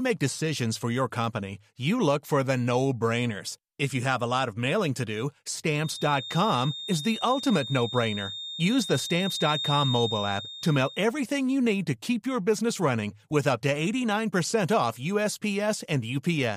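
From 5.74 to 11.07 s there's a feedback whistle, a thin steady tone at 3.7 kHz sitting about 10 dB under the speech and swelling and fading slowly in level. It's likely a speaker-to-mic loop hovering right at the edge of howling.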